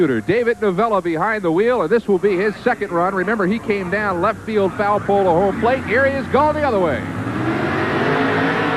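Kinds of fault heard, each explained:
Drift correction step: from 4.97 to 5.53 s the sound abruptly slows by 5.6% and drops by about 100 cents, close to a full semitone, then snaps back to its original speed and pitch. Speed and pitch shift together, so the passage is replayed at a lower rate rather than retuned. The likely cause is clock-matching software stepping the playback rate down for about half a second to refill its buffer before restoring the normal rate.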